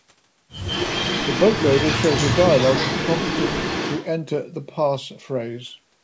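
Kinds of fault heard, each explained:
Echo leak, 0.65 to 4.06 s: a copy of the speech returns 150 ms late, only slightly quieter, likely loudspeaker pickup an echo canceller missed.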